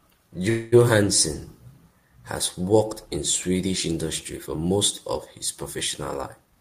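At 0.49 to 0.74 s the last sound is held as a fading buzz or hiss for about 228 ms, then resumes intact. This is a call audio freeze, likely from delayed packets draining the jitter buffer, adding 228 ms of delay. From 6.45 to 6.57 s a jitter buffer speed-up cuts repeated pitch-period slices, about a tenth of a second in total, so the audio runs at 208% speed with unchanged pitch and sounds hurried.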